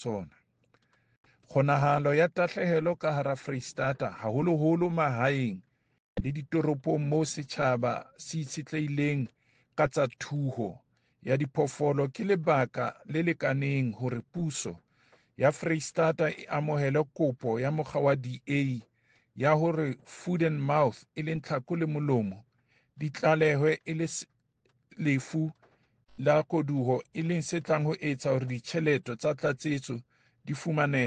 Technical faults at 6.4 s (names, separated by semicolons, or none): none